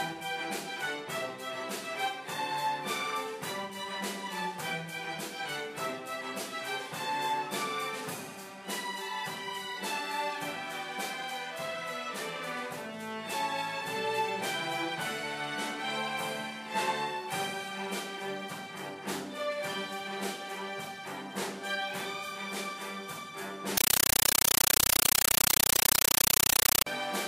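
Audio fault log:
23.77–26.86 s, compressed stream played as audio: an encoded Dolby Digital bitstream reached the output as if it were ordinary PCM samples and was never decoded. Each data frame comes out as a 9.33 ms burst of noise followed by zero padding, repeating 31.25 times a second. The sound is replaced by very loud, chattering static, and that burst pattern fits an AC-3 stream at 448 kbps.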